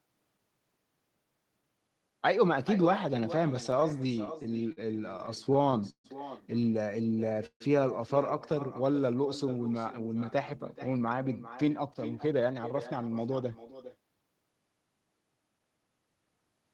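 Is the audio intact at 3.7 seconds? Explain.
No. From 3.71 to 4.79 s there are repeated stalls (stutter). Late-arriving packets kept emptying the jitter buffer, so the receiver stretched the last sound to fill each wait, the longest 50 ms and 153 ms in total. Nothing is lost, but the speech drags and stutters. An echo with no canceller is also present here: a quieter, thinner copy of the speech, about 15 dB down, returns roughly 0.4 s later after the far end's loudspeaker feeds its microphone.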